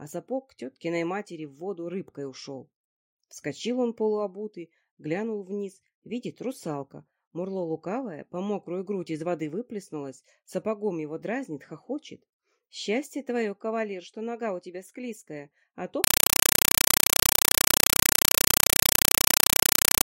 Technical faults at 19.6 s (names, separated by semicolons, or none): compressed stream played as audio